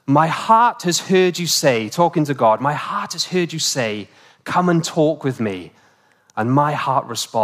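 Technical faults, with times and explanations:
2.83 to 5.22 s, crude rate conversion: the speech picks up a gritty, inharmonic fizz, roughly 25 dB below the signal, that tracks the loud and bright bits. It sounds like unfiltered linear interpolation, which fits a jump from 32 kHz to 44.1 kHz, and that throws off tones unrelated to the speech.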